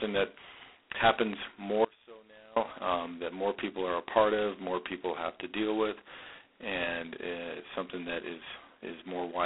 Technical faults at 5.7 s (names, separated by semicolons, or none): G.726 ADPCM